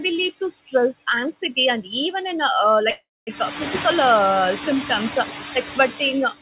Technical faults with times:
0.00-6.42 noise suppressor artifacts
2.90-3.29 call audio freeze

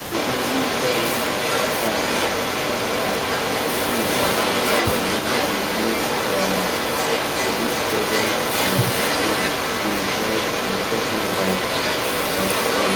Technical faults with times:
0.00-0.13 speech suppressed in double talk
0.00-12.96 echo leak

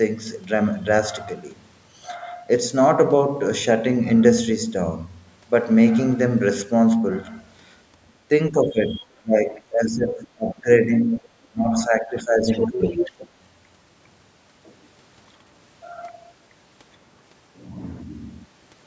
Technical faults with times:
8.50-13.03 speech suppressed in double talk
12.42-13.27 other side's voice leaking through

